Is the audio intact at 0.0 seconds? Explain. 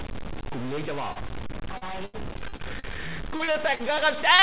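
No. A stuck bit runs from 0.0 seconds through the whole clip, likely one data bit held at a fixed value. About half the samples are pushed off by that bit's weight, giving distortion and noise filling the pauses, above a call path band-limited to 4 kHz.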